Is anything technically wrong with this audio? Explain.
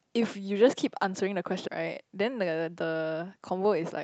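Yes, there are two faults in this speech.

At about 1.67 s the speech abruptly lurches forward, with no pause or filler covering the jump. This is a skip ahead: roughly 400 ms of audio never got played, either lost in transit or discarded when the jitter buffer overflowed while newer audio was already queued. Playback joins the two sides of the gap almost seamlessly, so the missing stretch simply vanishes rather than leaving silence.

From about 3.64 s to 4.00 s the speech sounds slightly rushed, running at about 108% speed while the pitch stays unchanged. This is a jitter buffer speed-up: the buffer was holding more audio than its target, so the receiver trimmed short pieces one or a few pitch periods long, repeatedly, removing roughly 40 ms in total to bring the delay back down. The Opus call path still caps the top end at 8 kHz throughout.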